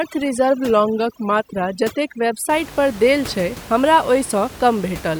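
From 0.00 s to 2.49 s the speech carries overdone noise removal. The suppressor was set far too aggressively, so it cut individual frequency bands to nothing whenever their level sat close to its noise estimate, and the weaker parts of the speech were removed along with the background noise. The room noise, about 17 dB under the speech, collapses into near silence sprinkled with twinkling specks.

Inside that stretch, from 0.67 s to 1.54 s, the speech abruptly plays about 5.5% slower and drops 97 cents in pitch, nearly a full semitone flat. After 1.54 s both speed and pitch snap back to normal. The likely cause is a drift correction step, where clock-matching software changed the playback rate in a single jump to rebalance its buffer, moving speed and pitch together.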